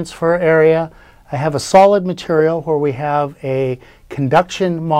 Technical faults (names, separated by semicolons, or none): hard clipping